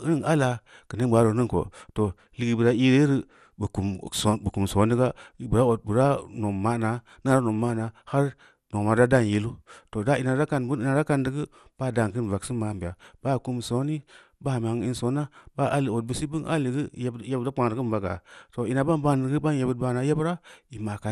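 From start to finish the speech carries a dull, clearly gurgling quality with a grainy edge, and nothing reaches above 15 kHz. That's most likely MP2 compression: Layer II divides the signal into 32 sub-bands and shares out bits among them, and at a rate in the region of 80 kbps the top bands get dropped and the surviving ones are quantised coarsely. Bands flickering in and out give that unsettled, low-rate digital radio texture.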